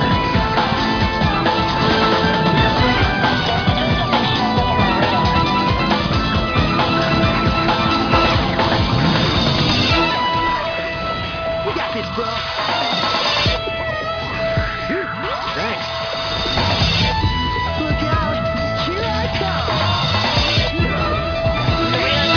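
No technical faults can be heard anywhere in this audio. Nothing in it calls for a timestamp or a cause.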